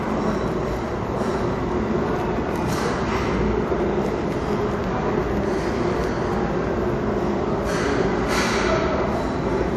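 Everyday sound whose smeared, swirly artefacts carry a second layer of grainy ones throughout, with nothing above 14.7 kHz. This points to likely transcoding between lossy codecs, roughly a 64 kbit/s MP3 re-encoded to WMA, rather than a single encode.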